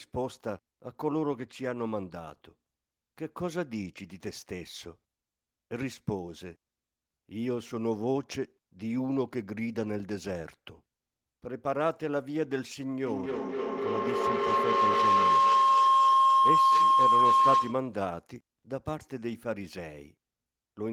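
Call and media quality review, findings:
Feedback howl, 13.06–18.04 s: co-located call devices forming a self-reinforcing acoustic loop; a tone near 1 kHz swells about 8 dB over speech, the loop repeating roughly every 300 ms.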